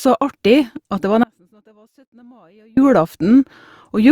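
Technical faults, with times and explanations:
1.24–2.77 s, audio dropout to a faint residue: after "det var" the speech cuts abruptly for 1.54 s. A faint leak remains, roughly 35 dB down, likely from a lost signal on a still-live path.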